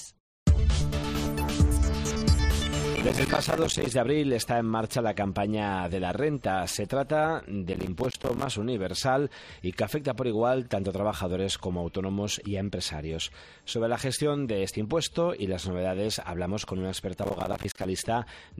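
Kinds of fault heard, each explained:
Processor overload crackle: The processor misses processing deadlines, leaving tiny silent gaps spaced like 5 ms buffers. They merge into three gritty bursts of crackle.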